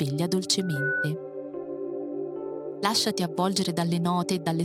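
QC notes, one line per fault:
0.60 to 1.13 s, loudspeaker feedback squeal: a steady 1.5 kHz tone swells over roughly a third of a second to about the level of the surrounding audio. The microphone is re-amplifying its own loudspeaker, and loop gain above unity at that frequency lets it build by itself.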